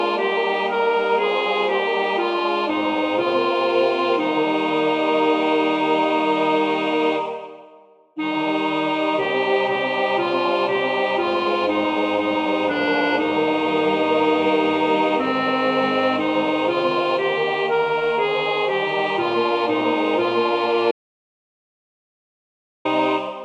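At 20.91 s the audio drops out to silence and stays dead until 22.85 s, nearly two seconds of silence with no room tone at all. Most likely the input got cut or muted while recording carried on, so whatever happened there is simply gone.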